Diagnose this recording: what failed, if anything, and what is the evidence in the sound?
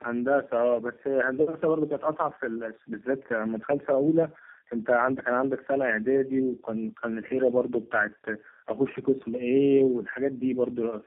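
The failure is at the codec stage: tandem speech coding, present for the whole clip. The speech sounds rough, muffled and warbly from start to finish, with nothing above 3.6 kHz. The call was decoded and re-encoded at each network boundary, and each coder worked on the previous one's damage. The compounded artefacts point to about three low-rate speech coders in series, such as AMR-NB and G.729A, joined by G.711 links.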